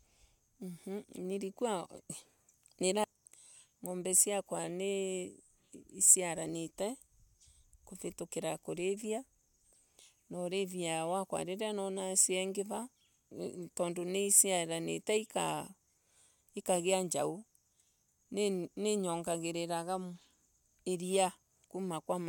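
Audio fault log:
No faults found in the speech recording.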